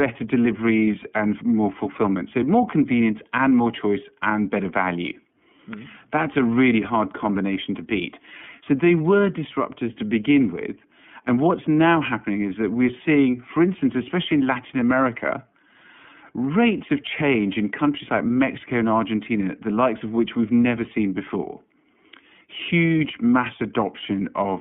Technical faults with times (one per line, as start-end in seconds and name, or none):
0.00-24.61 iLBC codec